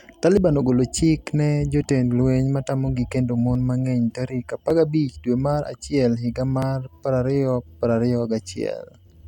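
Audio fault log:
0.37, 1.82 (after "ogolo chik ne"), 3.55, 4.70, 5.66, 6.62 s: dropped buffer (overrun), likely; skips where roughly 10 to 30 ms vanish and the speech jumps ahead with no silent gap, unlike a dropout.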